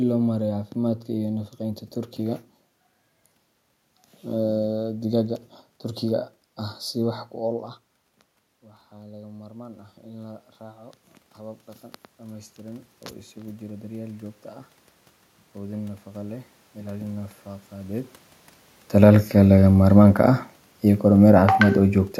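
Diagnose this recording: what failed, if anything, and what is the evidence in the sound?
Call processing is the stage that misbehaves. Near 7.5 s the talker leans away and the level drops about 19 dB, then from 8.96 to 19.36 s automatic gain rising slowly lifts it about 15 dB, room noise swelling right along with the voice.

The same control then overcorrects. After the talker comes back closer around 18 s, automatic gain falling runs from 19.37 to 21.78 s, pulling about 4 dB out. The sound starts hot and sinks gradually, with the background sinking too.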